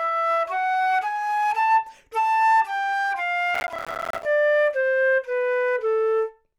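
A recording of sounds, marred by processor overload crackle from 3.55 to 4.25 s. For that stretch a gritty, tearing crackle rides on top of the sound. It stops once the stretch ends. The processor was too busy to deliver its audio buffers on time. Each late buffer came out as a tiny silent gap with hard edges. The gaps are very short and closely packed, which fits buffers of around 5 ms. Dozens of deadlines were missed over that stretch.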